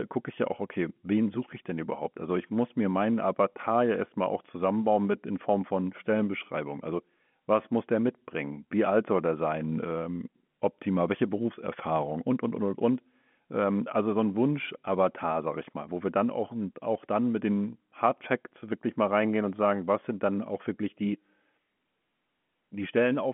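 Nothing stood out on listening to this speech.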